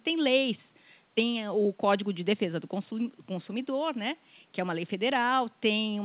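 The speech comes through a telephone-band call path with nothing above 4 kHz, which fits G.711 mu-law at 64 kbps, over room noise sitting about 39 dB below it, and no technical fault can be heard anywhere in the recording.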